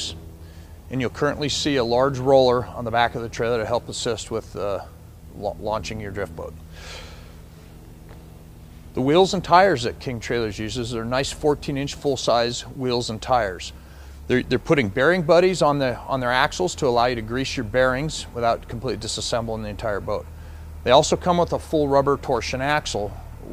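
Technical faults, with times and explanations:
Nothing stood out as a technical problem on listening.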